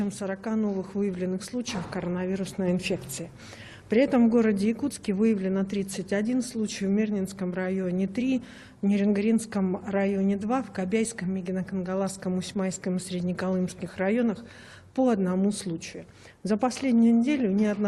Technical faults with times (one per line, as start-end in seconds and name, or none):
none